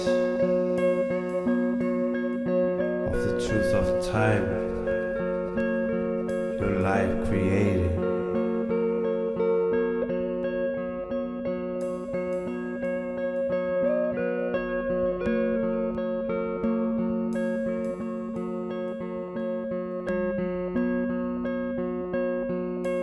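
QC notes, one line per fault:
No faults heard at any point, with nothing to flag for correction.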